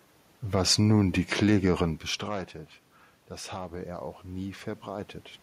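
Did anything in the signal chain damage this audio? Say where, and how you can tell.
Yes. From 3.28 to 5.16 s the voice and room noise swell together by about 4 dB, which is automatic gain rising in call processing: the input fell by about 15 dB, and the AGC raised its gain gradually to compensate.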